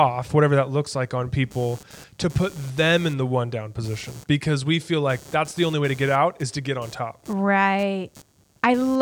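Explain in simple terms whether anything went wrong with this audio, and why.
Computer activity noise runs underneath the speech from start to finish. It is a faint buzzing texture pulsing around 150 times a second, quieter than the voice but present throughout. It happens because the computer's processor, graphics card or mouse draw changing amounts of power, and those shifts leak into the audio circuit through a shared ground connection. The buzz follows what the computer is doing, not what is being said, so it continues through pauses too.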